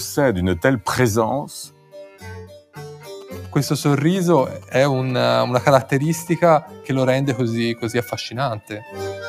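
A speech-tuned noise suppressor was left on for the whole clip, treating sustained material as noise, so the level pumps by around 5 dB as held parts and tails sink. The noise suppressor cut sound sharply at 1.68–2.23 s and 2.59–2.76 s, by up to about 12 dB, dulling sustained parts. From 3.21 to 6.29 s, a nearby phone's GSM signalling bursts were rectified into the audio, producing a galloping ticking buzz at 217 Hz, roughly 20 dB below the sound. Further suppressor cuts follow at 6.67–6.88 s (about 7 dB) and 8.61–8.96 s (about 10 dB).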